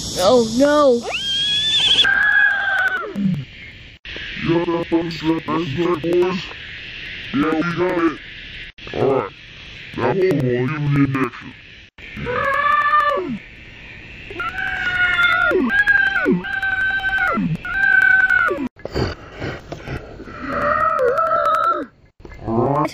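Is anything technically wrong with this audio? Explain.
Yes. From 2.04 s to the end, interleaved audio is read as planar. Each 93 ms block, which fits a 4096-sample block, splits into two half-speed copies, sounding an octave low, doubled and choppy at 10.8 Hz.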